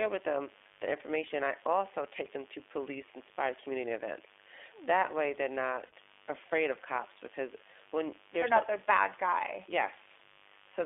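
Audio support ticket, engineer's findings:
Steady raspy buzz under the speech for the full clip, roughly 25 dB below it. Mains buzz: 50 Hz pickup with sharp switching spikes twice per cycle, from a dimmer, rectifier or unshielded run, spraying harmonics up into the kilohertz range.

Speech band-limited to roughly 300 Hz to 3.5 kHz, clear but rough and synthetic-sounding throughout, with plainly audible coding damage. iLBC codec: narrowband VoIP coding of each frame's excitation independently. Sound fits the 15.2 kbps mode with 20 ms frames.

Brief held, buzzy vowel-like smear at 5.86 to 5.93 s (60 ms) and at 10.18 to 10.21 s (20 ms), with the voice recovering immediately after each. Lost iLBC frames: packet loss concealed by repeating the last pitch cycle mixed with noise. Lengths fit three frames and one frame missing.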